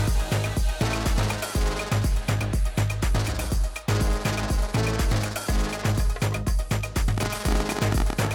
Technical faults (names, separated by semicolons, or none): train of clicks